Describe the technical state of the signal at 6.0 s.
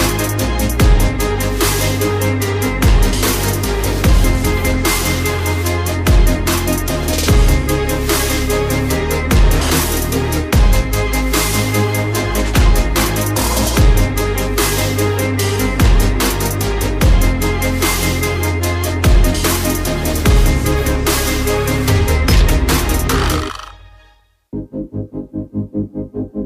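At 6.0 s the signal runs cleanly, with no dropout, distortion, glitch or other fault.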